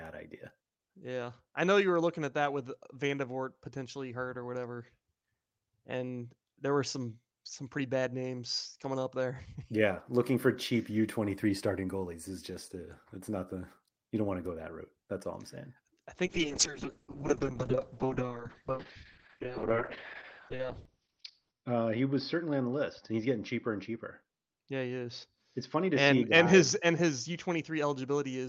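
Speech clip with a call bitrate drop from 16.26 s, right after "all I'm saying I", running to the end: the encoder falls from 48 kbps to 6 kbps, bandwidth narrows from 20 kHz to 6 kHz, leaving muffled, coarse, watery sound.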